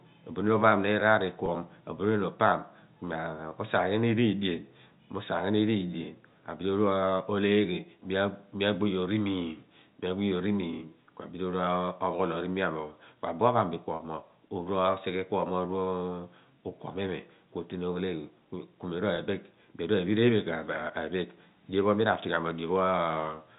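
Packet loss with pitch repetition hits at 1.46 s, 13.96 to 14.00 s and 19.16 s, gaps of 20, 40 and 20 ms (single and paired packets, it seems) bridged by a repeated pitch period. Each sounds like a brief buzzy hold, visible as repeating identical waveform cycles and flat, stretched harmonics on a spectrogram.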